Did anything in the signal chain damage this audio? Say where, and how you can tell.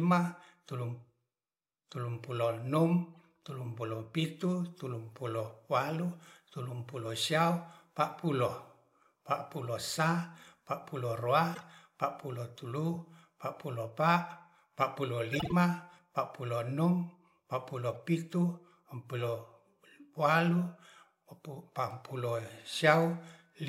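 Yes: corrupt frame decoded at the codec stage, at 3.15–3.18, 11.54–11.63, 15.33–15.52 and 17.94–17.97 s. Each is a brief chirp or noise blip spanning a few frames. Damaged compressed frames were decoded anyway, putting energy at the wrong frequencies.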